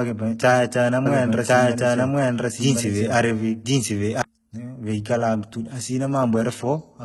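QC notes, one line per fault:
Throughout: HE-AAC compression, likely. Gritty, metallic treble rebuilt from copied lower bands, nothing above 11.8 kHz; heavy damage that fits a very low bitrate, around 16 kbps.
1.06–4.22 s: doubled audio track. A second full-band copy of the speech runs about a second behind at roughly equal level, starting and stopping abruptly, likely a duplicated capture path.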